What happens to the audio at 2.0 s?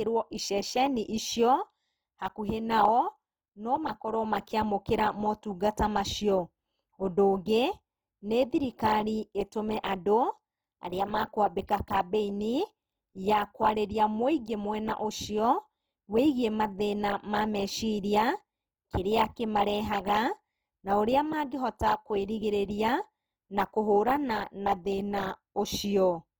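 Opus compression is audible at 2.0 s, as it is across the whole clip. The likely cause is an Opus encoder in its music-style CELT mode, which fits a low rate of about 24 kbps. With so few bits, the encoder keeps each band's energy but fills the detail by copying lower bands or inserting noise. The full bandwidth stays, but the speech sounds rough, grainy and noisy rather than hollow or swirly.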